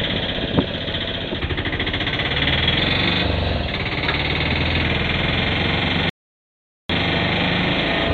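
From about 2.78 s to 4.82 s the whole thing suddenly runs fast, about 5.25% quicker, with pitch rising along with it by roughly 88.5 cents, so just shy of a semitone sharp. Then it drops straight back to normal. Speed and pitch moving together in one jump like that is the signature of a drift correction step: clock-matching software likely bumped the playback rate in a single move to rebalance its buffer, then let it go.

At 6.10 s the audio cuts out to dead silence and picks up again at 6.90 s, right where it left off. That's a rebuffering stall: the player ran dry of downloaded audio and simply waited for more to arrive. Nothing gets skipped, but about 0.8 s of extra time is stuck into the middle of the clip, and it shows up as a clean gap rather than a glitch.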